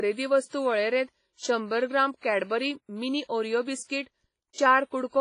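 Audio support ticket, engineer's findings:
Whole clip, speech: ringing, washy texture, hiss that swells and fades with the speech, smeared over tens of milliseconds. Likely WMA compression, heavy damage, which fits a low bitrate near 24 kbps. Spectrogram: hard ceiling at 10.4 kHz with nothing above it, blurred onsets, holes where weak components were zeroed. Waveform: pre-echo ahead of transients.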